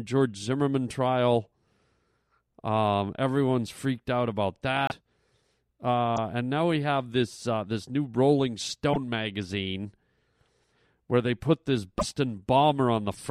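At 4.87 s, just after "everyone's freaked out about", the audio jumps ahead and a 58 ms disturbance follows. The same happens at 6.15 s for 26 ms, just before "and now we have", at 8.92 s for 44 ms, and at 11.98 s for 55 ms, after "where they put this". Each disturbance is a brief chirp, noise burst or gap. The likely cause is a broken MP3 bit reservoir: frames of about 26 ms went missing, so the frames after each cut decoded borrowed bytes from the wrong frame.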